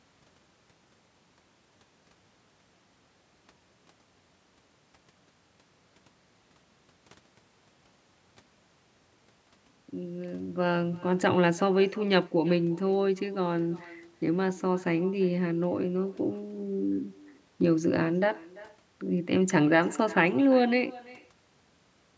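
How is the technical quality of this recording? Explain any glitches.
The speech carries an uncancelled echo from start to finish. Echo with no canceller: the far end's loudspeaker feeds the microphone and returns every phrase about a third of a second later, about 23 dB down and thin. Unlike room reverberation, it is a distinct delayed repeat rather than a smooth decaying tail. The band stops at 8 kHz, consistent with ordinary call microphone processing.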